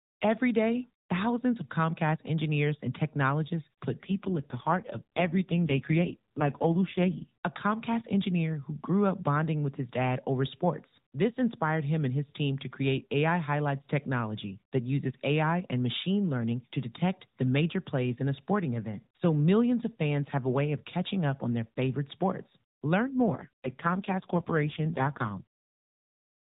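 An AMR rate drop occurs twice, from 4.04 to 7.27 s and from 23.01 to 25.42 s. The mobile codec falls to a lower rate, fitting a step from 12.2 to 4.75 kbps, leaving the speech rougher and more synthetic with no gap or band change.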